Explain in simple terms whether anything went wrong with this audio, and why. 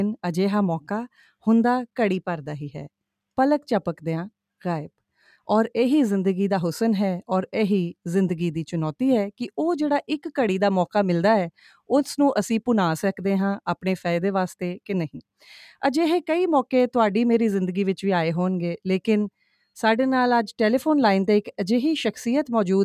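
Nothing stood out as wrong on listening to this audio.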